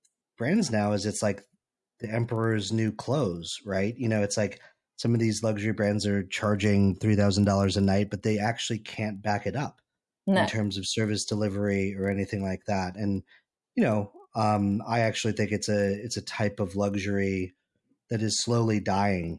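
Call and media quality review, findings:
Resampler restarted on every block: 25 Hz tick/buzz throughout; 48 to 24 kHz converter reset per 40 ms block. Spectrogram: evenly spaced vertical lines.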